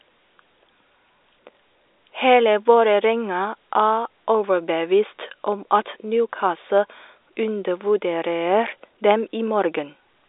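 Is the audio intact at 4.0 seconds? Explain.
Yes, the speech at 4.0 seconds is intact, carried cleanly through G.711 telephone coding with the usual narrow line band and nothing above about 3.8 kHz.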